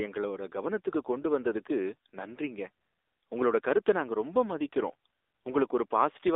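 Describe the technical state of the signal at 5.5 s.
At 5.5 s the speech carries AMR narrowband mobile codec damage throughout: a 300 Hz to 3.7 kHz band, plus buzzy, synthetic pulse-model texture suggesting about 7.4 kbps, unlike a plain telephone filter.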